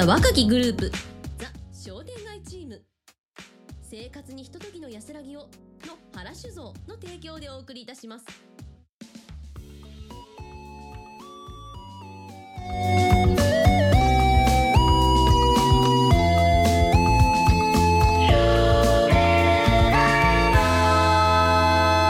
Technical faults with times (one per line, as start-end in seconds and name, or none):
0.44-1.64 zipper noise
12.52-12.96 zipper noise